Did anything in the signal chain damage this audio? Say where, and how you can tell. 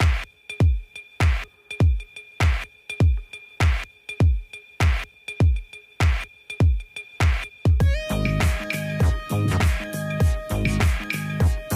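Yes, corrupt frame decoded at the codec: a faint glitch at 7.50 s, a loud glitch at 8.73–8.76 s, where bit-damaged frames played with misplaced spectral energy.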